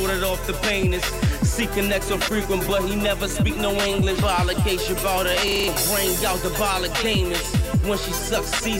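At 5.48 s a system hang loop sets in and lasts until 5.68 s. The playback side stalled while the audio hardware kept reading the same stretch of its ring buffer, so a single 40 ms fragment repeats five times back to back. At a loop rate of 25 Hz this comes across as a brief, hard-edged rattling stutter rather than a smooth tone, and about a fifth of a second of the original sound never plays.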